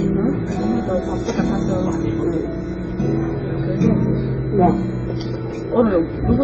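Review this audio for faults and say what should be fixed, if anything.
Throughout the clip the audio carries two layers of coding damage, which points to transcoding between lossy codecs, likely a low-rate AAC-LC encode near 16 kbit/s later re-encoded to Opus near 32 kbit/s. The Opus pass spends bits reproducing the earlier artefacts while adding its own, and the first encoder's band limit survives, so nothing remains above 8.1 kHz. A spectrogram shows a hard ceiling there, with blotchy, patchy energy beneath it. To prevent this, encode once from the original uncompressed source at an adequate bitrate rather than re-encoding an already compressed file.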